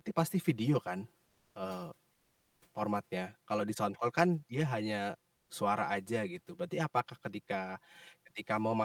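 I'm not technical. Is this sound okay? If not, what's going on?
No. Channel delay (comb filtering) runs throughout. One side of the stereo speech arrives about 5 ms late, and when the two sides are combined, matching parts cancel at regularly spaced pitches starting near 100 Hz, so it sounds hollow and phasey.

Comfort noise replaces the background from 5.35 to 5.49 s. For about 140 ms the real room sound gives way to a smooth, featureless hiss. The likely cause is that the sender stopped transmitting during a pause and the receiver filled in artificial noise.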